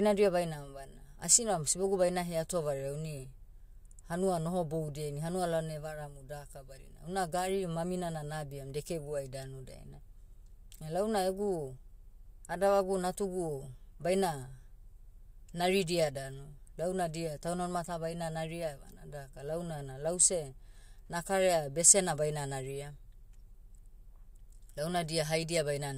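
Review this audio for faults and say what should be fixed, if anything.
Nothing needs fixing; no faults can be heard.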